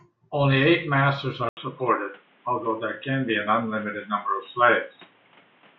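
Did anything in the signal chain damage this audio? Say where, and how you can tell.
Yes. From 1.49 s to the end, the speech loses everything above 3.8 kHz after an 80 ms silence, and a faint new noise floor appears while the level stays roughly the same. This is likely the input switched to a poorer device at the driver stage, not a codec bandwidth drop, which wouldn't bring a gap or different background noise.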